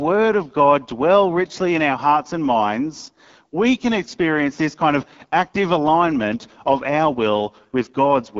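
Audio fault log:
Throughout: AMR wideband (HD Voice) codec. The speech has passed through an AMR-WB encoder running at one of its lowest modes, and the plainly audible damage fits the 8.85 kbit/s rate. At this rate the pulse-driven vocal tract model has too few bits to match each sound closely, so the speech comes out rough and raspy. Content up to 6.4 kHz is modelled, and the band from 6.4 to 7 kHz is filled with shaped noise rather than real detail.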